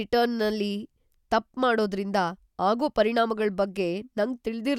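Speech recording with no audible technical faults anywhere in the clip.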